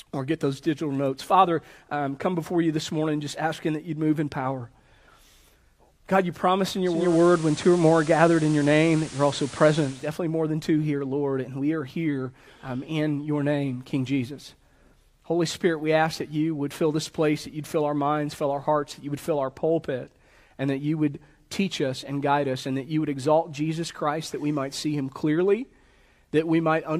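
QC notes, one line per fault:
6.84–10.16 s: digital radio blending to analogue. A 381 ms cross-fade to FM brings hiss roughly 20 dB down and a level shift of about 4 dB.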